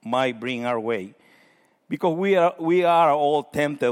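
Nothing goes wrong anywhere in this bit of speech; there's no moment where a technical fault shows up.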